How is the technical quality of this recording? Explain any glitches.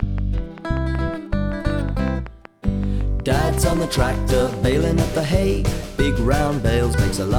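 The recording is marred by a steady ticking for roughly its first two-thirds. From the start to 4.73 s, a train of clicks sounds at a regular 5.3 per second, around thirty sharp pops of near-identical shape, their peaks roughly 5 dB above the surrounding sound, so they cut through rather than blending in. Such a uniform, evenly paced pulse train is likely interference from nearby equipment or a faulty connection or power supply repeatedly injecting the same spike.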